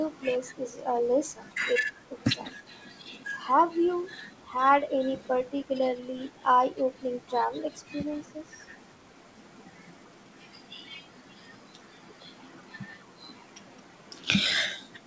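From 2.45 to 2.54 s, an echo leak: a faint speech copy arriving 198 ms late, likely canceller residue, seen as weak, repeated spectrogram bands.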